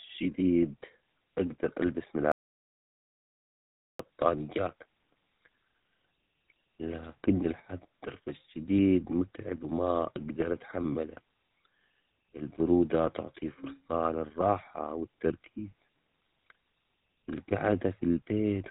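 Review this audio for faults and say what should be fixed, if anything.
The speech passed through the GSM full-rate codec, the original mobile-phone coder. It models the vocal tract and excites it with a sparse, regularly spaced pulse train, discarding most excitation detail, and the sound fits its 13 kbps rate. Throughout the clip this leaves a plainly audible buzzy, gravelly roughness, and nothing survives above 3.9 kHz, so the top end is missing. To prevent it, capture or transmit with a wideband codec at a higher bitrate instead of GSM full rate.

From 2.32 s to 3.99 s the audio input was likely lost, through a dropped link, disconnected device or accidental mute, while the recorder kept writing silence. The result is an audio dropout to silence: the sound cuts off abruptly, leaving dead silence with no room tone for about 1.68 s, then resumes mid-flow, and whatever was said in that gap is gone. 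To prevent it, secure connections and monitor input levels during recording so any interruption is caught and retaken.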